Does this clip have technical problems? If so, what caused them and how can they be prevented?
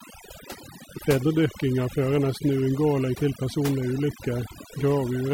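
Yes. Overdone noise removal runs throughout this speech clip. The noise reducer was set too aggressively. It pulls individual frequency bands down whenever they sit near its noise estimate. The background becomes near silence with twinkling specks. Quieter parts of the voice vanish too. To prevent this, use a gentler reduction amount and take the noise profile from a clean stretch of room tone.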